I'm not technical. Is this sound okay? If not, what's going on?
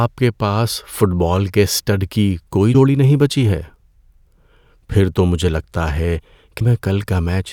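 No. Damaged data in a compressed stream causes two brief glitches, at 2.70 to 2.75 s and 6.57 to 6.62 s: corrupted bits confuse the decoder, which garbles that moment of speech.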